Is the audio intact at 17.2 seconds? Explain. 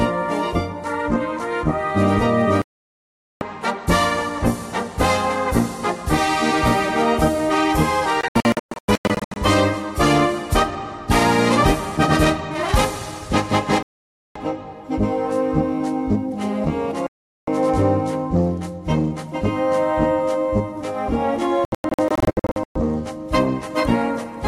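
No: a digital broadcast dropout runs from 17.07 to 17.48 s. The receiver lost valid frames and muted, leaving about 0.41 s of silence.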